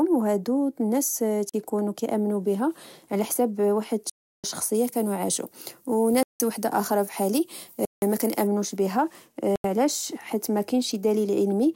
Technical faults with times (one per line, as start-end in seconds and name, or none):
1.49-1.54 block of digital silence
4.10-4.44 block of digital silence
4.74-8.47 pre-emphasis left on
6.23-6.40 block of digital silence
7.85-8.02 block of digital silence
9.56-9.64 block of digital silence